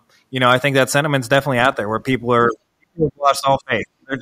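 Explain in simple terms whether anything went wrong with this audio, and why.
From 2.48 s to the end at 4.21 s, the speech keeps dropping away, sometimes to almost nothing, for about a second and a half in all. This is speech suppressed in double talk. An echo canceller likely mistook the talker for echo while both sides spoke.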